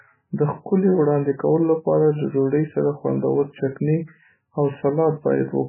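Throughout, the speech sounds watery and dull, with nothing above 3 kHz, a hard ceiling on the spectrogram, and flickering gaps: heavy MP3 compression, likely at a very low bitrate near 8 kbps.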